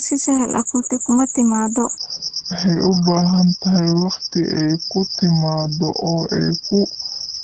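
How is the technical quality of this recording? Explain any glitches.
The technical quality is poor: heavy low-bitrate compression runs through the whole clip, and most of it plays back too slowly.

Opus voice compression affects the entire clip. At about 10 kbps in SILK wideband mode, the coder models the speech with linear prediction and quantises the excitation coarsely, so it sounds muffled, hoarse and faintly robotic. On a spectrogram, energy stops abruptly at about 8 kHz, with smeared, blocky harmonics below.

A section at the wrong speed begins at 1.98 s, right after "kuma timaado", and lasts to the end. Playback runs at 0.723 times normal speed, so the speech drags and drops about five semitones, likely from a clock mismatch. On a spectrogram, harmonics and formants shift downward and spread out in time.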